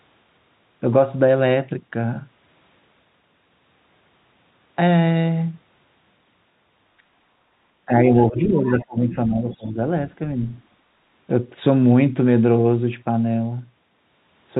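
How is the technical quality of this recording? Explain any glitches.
The recording has a telephone-band sound, with nothing above 4 kHz, consistent with G.711 coding. Around the 8 to 10 second mark there are two related faults from a moment when both ends of the call talked at once.

Speech suppressed in double talk, from 7.86 to 9.77 s: the talker's level drops by up to about 15 dB in patches totalling roughly a second and a half. The likely cause is an echo canceller that could not separate the talker from the loudspeaker echo and turned both down.

Other side's voice leaking through, at 8.17 to 8.26 s, 8.44 to 8.49 s, 8.68 to 8.72 s and 9.52 to 9.67 s: brief scraps of a second voice appear, about 30, 15, 20 and 25 dB below the speech. These are likely loudspeaker sound the echo canceller failed to remove from the microphone signal.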